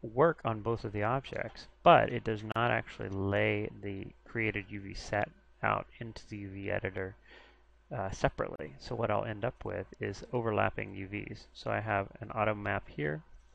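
At 2.52 s and again at 8.56 s there's a gap at a join of encoded pieces, a gap of about 37 ms each, six seconds apart. Separately encoded chunks were butted together untrimmed, so encoder delay and end padding open a hole with smeared edges before the sound picks up where it stopped.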